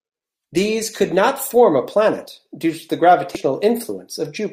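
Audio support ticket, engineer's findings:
Speech clip. Short glitch at 3.35 s, right after "planet due to the". Damaged data in a compressed stream. Decoder misreads corrupted frames, loses sync, resumes at next valid frame header. Component: compressed file or transport, upstream of decoder. Check source file integrity and stream delivery for lost or overwritten bytes.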